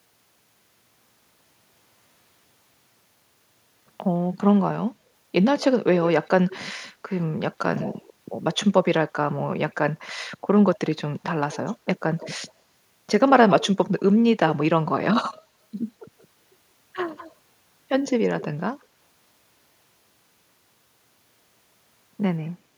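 Echo leak at 5.59–6.56 s, 7.76–8.56 s, 11.52–12.53 s, 13.28–13.68 s, 16.19–16.25 s, 17.16–17.34 s and 18.1–18.85 s. A faint delayed copy of the speech trails it by 160 ms, and that lag creeps up to 170 ms by the last occurrence. The copy sits roughly 15 to 20 dB under the speech, and about 40 dB under at 16.19 s. The likely cause is a loudspeaker at the far end whose echo canceller failed to strip out everything its microphone picked up, so part of it came back down the line.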